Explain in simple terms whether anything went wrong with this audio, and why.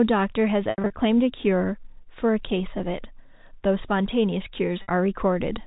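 Packet loss with pitch repetition: chunks went missing around 0.7 to 0.9 s and 4.82 to 4.88 s, so the receiver replayed the last pitch, causing brief buzzy, held sounds.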